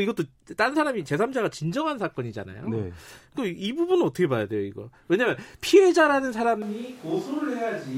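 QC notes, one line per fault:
6.62 s to end: switch to a distant microphone. The sound turns roomy and hollow, drops by about 5 dB, and loses bass, with room noise rising. Likely the close mic's signal dropped out, leaving a far pickup. Spectrograms show thinner lows and a raised noise floor, waveforms a sudden step down.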